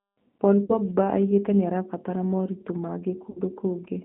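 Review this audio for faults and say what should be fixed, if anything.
The whole clip carries G.729 codec damage, and it is plainly audible. The sound has passed through a narrowband VoIP line at about 8 kbit/s. Only the band from roughly 150 Hz to 3.6 kHz survives. Everything above is gone, so the speech sounds thin and boxed in. The codec rebuilds each 10 ms frame from a vocal tract filter, a pitch predictor and a few pulses. That leaves a rough, slightly synthetic texture. To prevent it, route the call over a wideband codec such as G.722 or Opus.

VoIP packet loss concealed by the speech codec occurs twice. The first runs from 0.65 to 0.79 s, with about 40 ms missing. That fits two lost 20 ms packets. The second runs from 3.30 to 3.39 s, with about 60 ms missing, which points to three packets. In each gap the decoder repeats its last pitch and filter at falling gain. The sound smears into a buzzy tone or coloured noise that fades. 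It stays weak for a short while after packets return, because each frame builds on the one before. To prevent it, fix the network path's loss or enable forward error correction and a larger jitter buffer.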